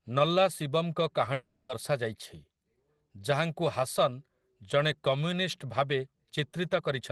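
From 1.33 s to 1.72 s, a likely long network dropout stops audio from arriving. The receiver extends the last sound into a fading buzz for 0.36 s, then leaves 40 ms of silence before the speech returns with that stretch missing.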